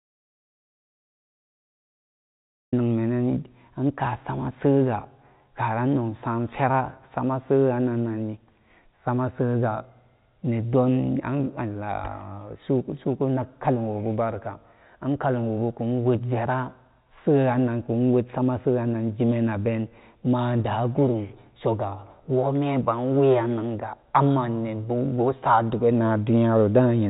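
From the very first moment until about 2.73 s, the recording holds silence. This is an audio dropout to silence, already under way when the clip begins. There is no room tone and no hiss. The speech then starts abruptly. The likely cause is lost input, such as a disconnected device, a failed link or a mute, while writing continued. Anything said before 2.73 s is gone. After that, the narrow G.711 telephone band is audible, with nothing above 4 kHz.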